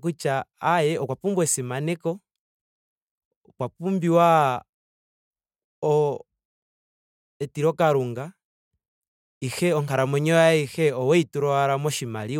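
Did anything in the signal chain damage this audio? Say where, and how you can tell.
No, no damage found.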